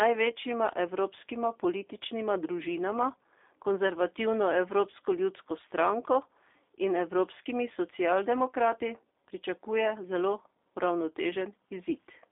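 Speech that has passed through a G.729 codec, heard for the whole clip: the sound was squeezed into 8 kbit/s and rebuilt from a vocal tract model, a pitch predictor and a few pulses per frame. Nothing above 3.7 kHz survives, the band sits at roughly 300 Hz to 3.6 kHz, and a plainly audible rough, synthetic edge runs throughout.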